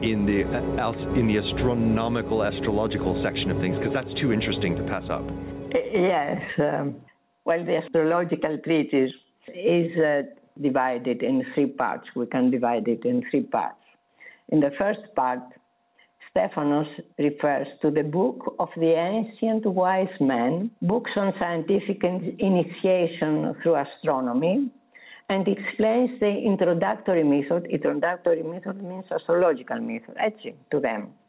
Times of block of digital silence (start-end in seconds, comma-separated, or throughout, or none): none